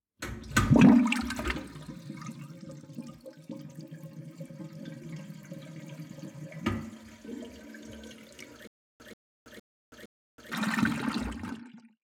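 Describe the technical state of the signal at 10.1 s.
At 10.1 s the signal is inside a stutter with silent gaps running from 8.67 to 10.52 s. The same 136 ms burst repeats four times, each followed by about 325 ms of digital silence (a 461 ms cycle). The cause is likely a stalled stream replaying its last fragment. Unlike random dropouts, the identical burst recurs at a steady pace, and the intended audio is lost.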